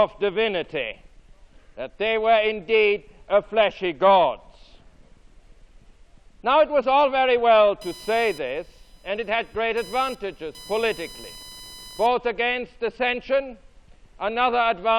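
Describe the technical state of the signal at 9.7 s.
Computer activity noise runs from 7.81 s to 12.07 s, covering 9.7 s. Shifting processor or graphics load disturbs the ground the audio circuit shares, adding a buzzy, chirping whine pulsing at around 1 kHz, roughly 25 dB below the sound, following the machine's activity.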